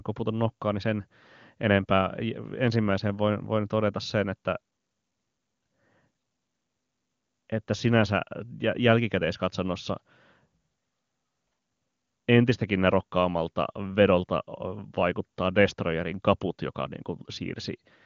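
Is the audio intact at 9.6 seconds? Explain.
Yes, the audio is intact at 9.6 seconds, with no dropout, distortion or other fault at that moment.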